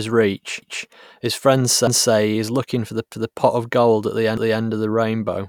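Overlapping chunks appear at 0.62, 1.87, 3.12 and 4.37 s: each 1-second chunk begins 250 ms before the previous one ended, so that stretch replays at every join. The result is a regular stutter, such as the doubling just before "his friends".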